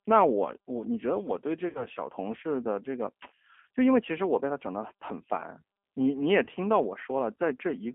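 This speech clip has been through the G.729 codec throughout, coded at 8 kbit/s over a line band of 250 Hz to 3.4 kHz. The voice is rebuilt from a filter, pitch predictor and sparse pulses, so it sounds plainly rough and synthetic. There is VoIP packet loss concealed by the speech codec at 1.69–1.85 s, where about 60 ms is missing, consistent with two lost packets. The decoder stretches the last sound into a fading buzzy tone or coloured noise, and the voice stays degraded briefly after audio returns. A shorter gap at 6.44–6.49 s loses about 30 ms, pointing to one packet.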